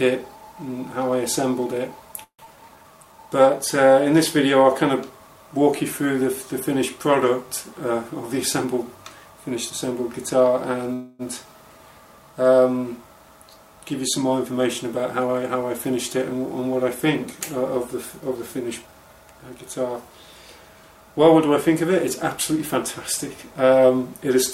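At 2.23 s the audio breaks off for about a quarter of a second, to 2.49 s. What fills it is the last sound drawn out as a fading buzz, then roughly 90 ms of silence, and when the audio resumes about 120 ms of it is simply gone. That's the signature of a long network dropout: likely a stretch of packets that never arrived, with the receiver concealing the hole and then skipping ahead past what was lost.

Right after, from 2.57 to 3.26 s, there's a jitter buffer slow-down. The buffer came out of that gap short, having shifted its delay by something like 50 ms, so it rebuilt a reserve by repeating tiny slices of the waveform over and over. That adds about 97 ms and the passage plays at roughly 87% speed. The pitch stays put but everything sounds drawn out.

Between 8.65 and 10.53 s it swings the other way with a jitter buffer speed-up. The buffer was holding more than it wanted, so it trimmed small pitch-period-sized chunks repeatedly, around 150 ms in all. 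Playback runs at about 107%, same pitch, noticeably hurried.

At 10.93 s comes a call audio freeze lasting until 11.22 s. The sound stalls into a fading buzz for about 262 ms, but with no silence and nothing dropped: when the audio picks back up it carries on exactly where it stopped. Packets were likely held up in transit, so the buffer ran dry and the wait got inserted, adding 262 ms of delay.

Two more jitter buffer speed-ups follow as the buffer works that extra delay back off. From 14.51 to 16.34 s it runs at about 106% and sheds roughly 100 ms. From 18.21 to 19.56 s it's the quickest of the three at about 111%, cutting roughly 150 ms, and that stretch sounds the most rushed.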